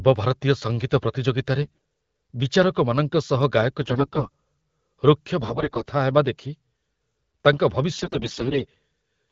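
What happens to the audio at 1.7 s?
From 1.62 to 1.78 s, AMR bit errors flip the less-protected bits in about a fifth of the data. Misplaced excitation pulses make the sound hoarse and gargly while keeping its level. On a spectrogram, the harmonics smear into ragged noise.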